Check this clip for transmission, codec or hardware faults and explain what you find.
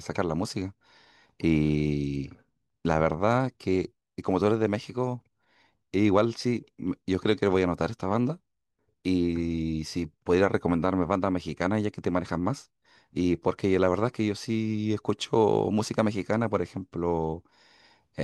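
No faults can be heard anywhere in this speech.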